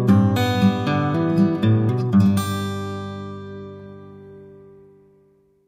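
Nothing goes wrong anywhere in the clip, so there's no technical fault to point to.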